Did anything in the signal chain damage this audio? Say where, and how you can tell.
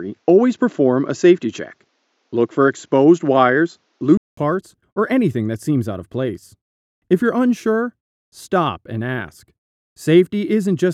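Yes. From 0.0 to 4.37 s the audio is band-limited, with nothing above 7.5 kHz. A 200 ms gap follows, and the full band and a level about 5 dB different return. Noise around 55 dB down differs. This is likely an input switched to a poorer device at the capture stage.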